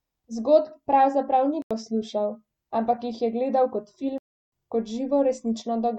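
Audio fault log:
1.62–1.71 s, block of digital silence: an 85 ms hole after "pravzaprav ni", with hard, unfaded edges where the output buffer went unfilled, which fits a 4096-sample block.
4.18–4.52 s, block of digital silence: a 341 ms dropout to silence after "jih je gledal kot", with abrupt, unfaded edges; consistent with a 16384-sample buffer left empty.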